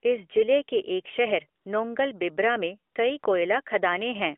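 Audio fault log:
1.62 s, 2.92 s and 3.20 s: AMR comfort noise. In each 40 ms gap the phone treated the talker as silent and sent no speech frames, so the receiver substituted smooth synthetic noise for the real background in the narrowband 250 Hz–3.5 kHz signal.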